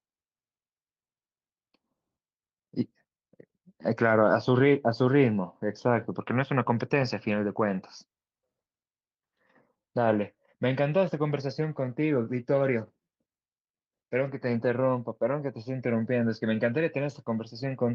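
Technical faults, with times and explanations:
No technical faults are audible anywhere in the recording.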